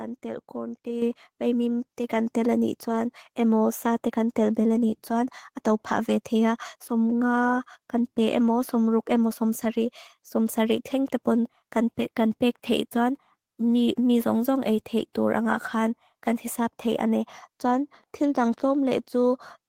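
A speech clip with a microphone volume stepped up at 1.02 s. Input gain jumps about 7 dB at once, lifting voice and background together.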